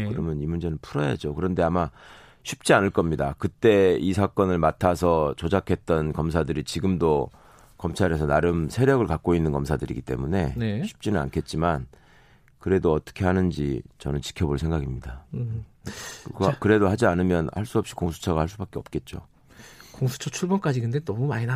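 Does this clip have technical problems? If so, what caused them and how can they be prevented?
No, nothing technical goes wrong in this speech recording, so there's nothing to trace back or guard against.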